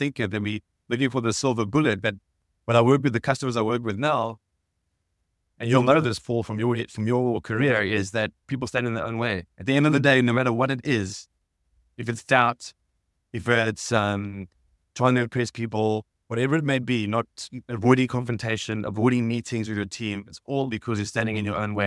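Nothing stood out as a technical problem on listening to this audio.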